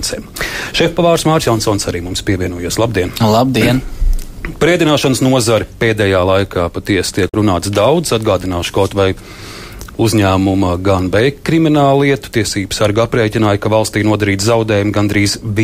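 At 7.28 s there's a quick garbled blip, lasting to about 7.35 s, so roughly 70 ms, that comes from damaged data in the compressed stream. A stretch of the encoded bytes got corrupted, so the decoder couldn't make sense of the frames there. It lost sync and had to hunt for the next valid frame header before it could pick the audio back up.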